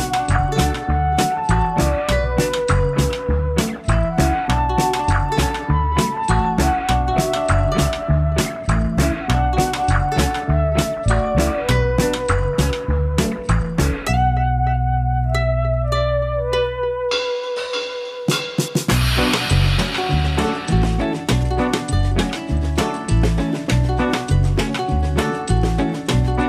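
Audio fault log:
No technical faults are audible: the signal stays continuous, with no gaps, distortion or disturbances anywhere in the audio.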